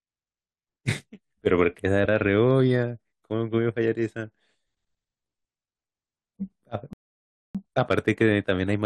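At 6.93 s the player exhausts its downloaded audio and halts, a rebuffering stall, until more data arrives at 7.55 s. The speech drops to silence for about 0.62 s, then resumes exactly where it stopped, with nothing missing but time added.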